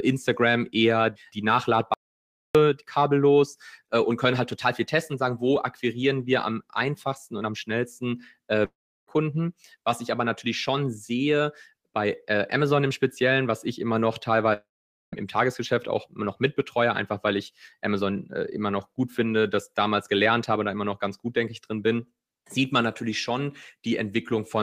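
At 1.94 s, right after "eher die", the speech stops dead. There is an audio dropout to silence lasting 0.61 s, until 2.55 s. The gap is silent, with no room tone. The input was likely lost, through a cut link or a stray mute, while the recorder kept writing silence. Speech resumes mid-flow with "kabellos äh und können". Whatever was said in between is gone.

Two long network dropouts follow. At 8.65 s, after "einfachsten und am schnellsten", the last sound is smeared into a fading buzz. Then comes about 0.35 s of silence, and speech returns at 9.10 s. About 0.42 s of audio never arrived. At 14.53 s, after "was ich immer noch", the same thing happens. This time 0.6 s is missing, with about 0.48 s of silence, ending at 15.15 s. In each case the receiver likely concealed the lost packets by extending the last sound until it gave up.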